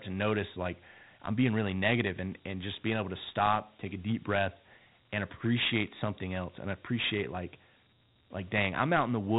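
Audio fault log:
Throughout: Dialogic VOX ADPCM. The speech has nothing above about 3.9 kHz, which points to 8 kHz sampling, and its plainly audible grit fits 4-bit Dialogic (OKI) ADPCM at 32 kbps. Each sample stores only a coarse step from a 12-bit prediction, so quantisation error rides on the signal as hiss that rises and falls with the speech. A spectrogram shows a hard ceiling near 3.9 kHz, with broadband noise filling the gaps between harmonics wherever speech is present.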